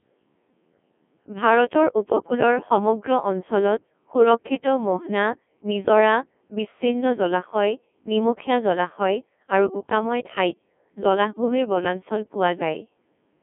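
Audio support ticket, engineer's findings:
Speech robotic and buzzy across the whole clip; waveform detail gone, pitch and envelope resynthesised from sine waves. Probable component: Codec 2 vocoder. Heavy damage, consistent with its 1.6 kbit/s mode, sending only pitch, voicing, energy and spectral envelope. Band limited to 200 Hz to 3.4 kHz.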